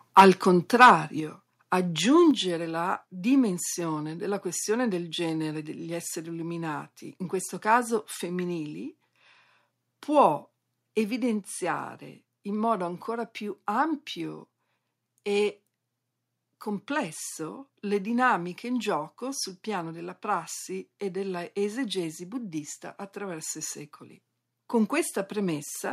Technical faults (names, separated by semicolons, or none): microphone overload; microphone volume stepped down; microphone volume stepped up